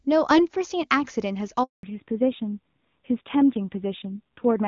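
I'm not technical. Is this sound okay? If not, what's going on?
No. At 1.63 seconds a handover gap occurs: the phone moved the call from one network to another, and during the switch no pieces of speech reached the other end. The sound fades out almost at once and stays silent for about a fifth of a second, until 1.83 seconds, when the new connection takes over. Whatever was said in that moment is gone; it isn't delayed, just missing.

Right after the switch, from 1.83 seconds to the end, there's a fallback to narrowband. Before the gap the call was using HD Voice, the wideband mode that carries a fuller range of sound. The new connection dropped to an older, simpler narrowband method that keeps nothing above 4 kHz. As a result, the voice sounds duller and more muffled from that point on, like an old landline. Its crisp edges, such as s and f sounds, are softened, and it has a rougher texture.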